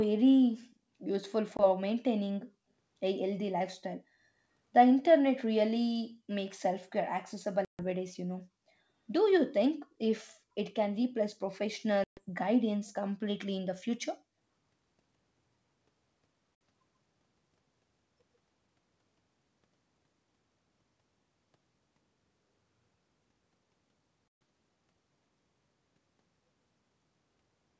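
Right at 0.71 to 0.76 s there's a very faint echo leak, a copy of the speech trailing about 141 ms behind, likely from a far-end loudspeaker whose echo canceller didn't fully scrub what its mic caught and sent back.

Then there's packet loss on the ADPCM call, five hard-edged dropouts: 1.57 s (20 ms), 7.65 s (140 ms), 12.04 s (130 ms), 16.57 s (60 ms) and 24.28 s (130 ms). After each silent gap the decoder's predictor and step size have drifted from the sender's, so the speech comes back slightly distorted before settling.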